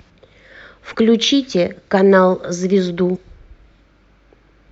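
A speech clip with damaged data in the compressed stream: corrupted frames make the decoder misread them and lose sync until it finds the next frame header. Each time this produces a brief chirp or blip lasting about 44 ms, at 0.90–0.95 s and 3.12–3.17 s.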